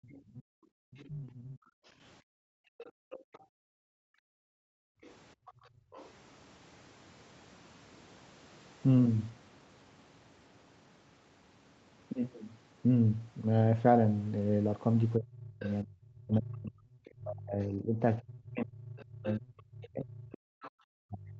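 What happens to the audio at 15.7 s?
The speech fades sharply, by around 35 dB at its deepest, from 15.18 s to the end. This is speech suppressed in double talk, likely from the echo canceller turning down both voices at once. From 15.63 to 15.71 s, a faint scrap of another voice about 20 dB below the speech slips through. That is the other side's voice leaking through, with the likely cause being loudspeaker echo the canceller missed.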